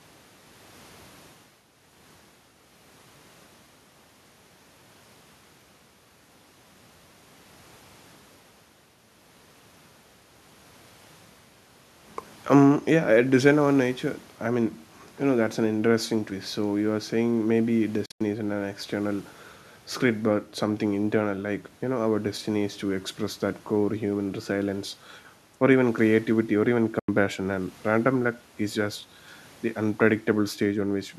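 Speech clip with two brief holes: at 18.06 to 18.21 s the sound cuts out in gaps totalling about 131 ms, the longest about 87 ms, and at 26.99 to 27.09 s it drops out for about 87 ms. Each time it resumes further along, as if it had kept playing. This is likely a Bluetooth dropout, where audio packets missed their delivery window to the headphones and were discarded, leaving silence until good packets arrived.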